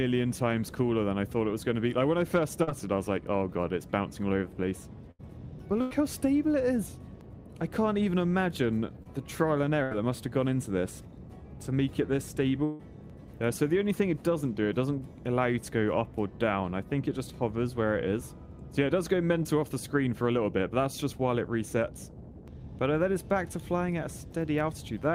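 At 2.63 s, short concealed packet loss. About 40 ms went missing. The receiver patched it by extending the prior sound, leaving a brief smear.

At 5.11 s, 5.81 s and 9.83 s, bursts of packet loss, about 80 to 100 ms each. The last sound holds, fades, then jumps ahead.

At 9.03 s, another short concealed loss of about 20 ms leaves a brief smear.

At 12.65 s, the longest burst, about 140 ms, becomes a held, fading stretch with audio skipped.

At 19.43 s, a final 20 ms concealed loss causes a brief wobble.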